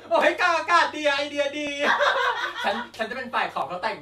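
At 0.21, 0.70, 1.18, 1.67, 2.16, 2.64, 3.13 and 3.62 s the speech skips briefly, roughly every half second, with about 15 ms gone each time. This audio missing between chunks is likely from a recorder handling 0.5 s blocks and dropping a sliver at each handover. Each skip sounds like a jump. The waveform shows an abrupt discontinuity at each point, and the spectrogram shows a thin vertical broadband line at evenly spaced intervals.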